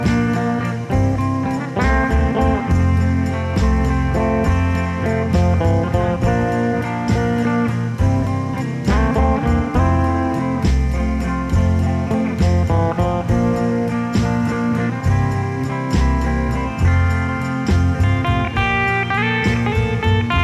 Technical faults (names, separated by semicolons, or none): none